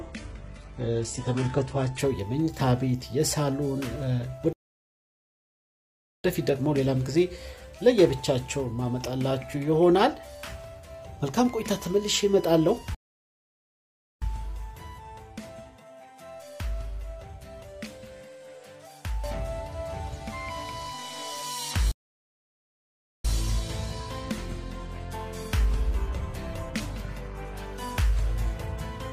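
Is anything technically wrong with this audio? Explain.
Yes, two kinds of fault are audible.

Adaptive stream starting at a low bitrate, 0 to 2.0 s: the opening is thin, with nothing above about 11.1 kHz, and the top end that remains has a synthetic, swirly quality with stronger codec artefacts. That character suggests a very low-bitrate stream using spectral band replication, something like HE-AAC around 12 kbit/s. At 2.0 s the player has measured the connection and switches to a better rendition, and the sound becomes fuller at once, with no gap. That sudden step up with continuous audio is what separates it from a band-limited recording, which would stay dull throughout.

Playback stall, three times: 4.53 to 6.24 s (1.7 s), 12.95 to 14.22 s (1.3 s), and 21.91 to 23.25 s (1.3 s). Each time the sound stops in mid-flow and there is complete silence. The likely cause is the player running out of buffered data or its thread being blocked until it recovers. 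These silences last over a second, which distinguishes them from brief packet dropouts.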